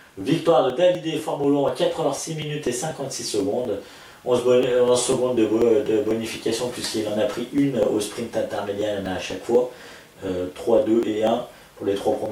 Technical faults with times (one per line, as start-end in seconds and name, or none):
0.21-12.26 periodic USB or driver dropouts